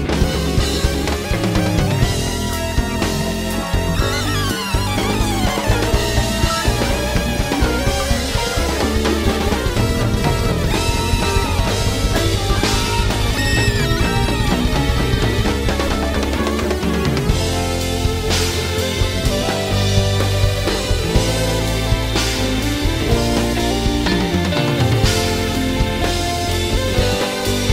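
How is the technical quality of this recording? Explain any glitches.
No glitches turn up anywhere in this recording, so there is nothing here to explain.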